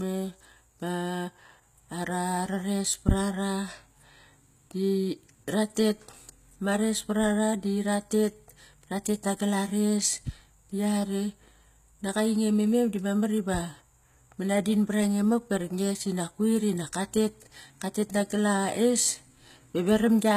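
From start to finish the speech carries the marks of HE-AAC compression, likely from a low-bitrate stream, with damage that is plainly audible. The lower spectrum is coded directly, while the treble is rebuilt by copying lower bands upward, so s sounds come out gritty and lispy rather than crisp. On a spectrogram the upper region looks smeared and blocky above the crossover, with harmonics misaligned there, and everything stops sharply at 14.9 kHz.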